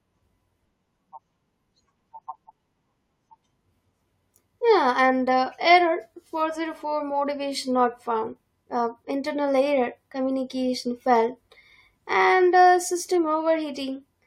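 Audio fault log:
Nothing to log here, as the speech runs along without a single fault worth noting.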